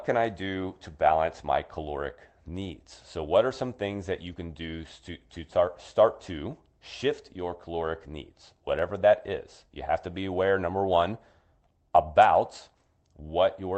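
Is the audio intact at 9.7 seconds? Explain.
Yes, the audio is intact at 9.7 seconds, with no dropout, glitch or other fault at that moment.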